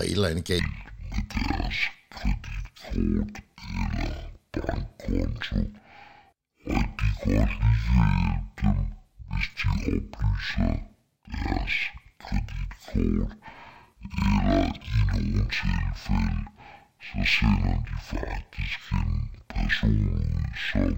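A speech recording that drops into a stereo read as mono fault at 0.59 s, right after "et eller andet", and stays that way to the end. The left and right samples are being taken in turn as one channel, so everything plays at half speed and a full octave (12 semitones) low. What separates this from a plain sample-rate mismatch is the faint mirrored copy of the sound in the upper half of the spectrum.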